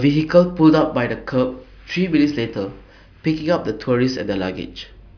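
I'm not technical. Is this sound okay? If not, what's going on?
Yes, this sound is okay; nothing is going wrong in it.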